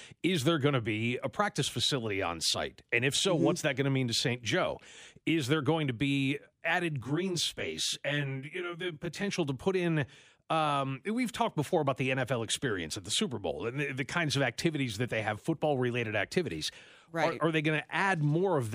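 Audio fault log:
7.01–9.28 s, channel delay (comb filtering): after "going to be added" the speech turns rough and slightly doubled until "to put in um". One channel arrives about 20 ms late, and summing to mono cancels shared content in fixed, evenly spaced notches starting near 30 Hz.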